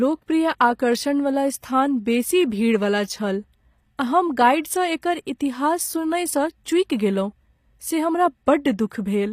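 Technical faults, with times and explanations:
Throughout, HE-AAC compression: the speech was likely encoded with HE-AAC at a rate that fits about 24 kbps. Only the lower spectrum is coded, and the treble is rebuilt from copied bands, so s sounds turn gritty and metallic. Nothing is present above 15.5 kHz.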